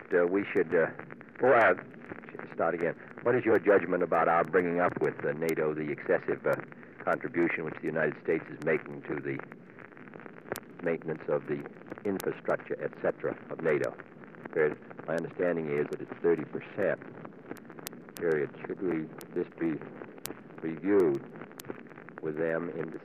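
From 0.12 s to 22.94 s, a steady stream of sharp ticks runs under the sound, about one every 0.15 s and around 150 in all, with uneven strength from tick to tick. These are word clock ticks. The receiving device is reading a digital link on its own clock instead of locking to the sender's. Because the two clocks drift apart by something like 150 ppm, they slip past each other often, and at each slip a single sample is dropped or repeated.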